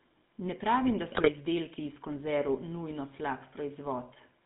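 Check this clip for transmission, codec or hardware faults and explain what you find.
Two faults here: the whole clip goes through a GSM full-rate codec, and there's a short burst of GSM bit errors early on.

GSM full-rate codec runs throughout. The speech only spans about 150 Hz to 3.7 kHz, and there's that buzzy, gravelly edge you get when the vocal tract is modelled and excited by sparse, regularly spaced pulses. The damage is plainly audible and fits the old 13 kbps full-rate coder.

GSM bit errors hit from 1.12 to 1.29 s, right after "pravim da" and before "izdelki iz konzerv nujno". Corrupted filter, pitch and gain values warp the spectrum frame by frame, so you get a squawky, gargling break. It sounds like roughly eight bad frames, consistent with a bit error rate of around 2%.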